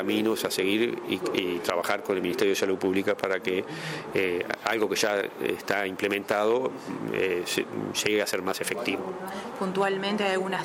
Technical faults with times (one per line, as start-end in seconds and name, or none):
none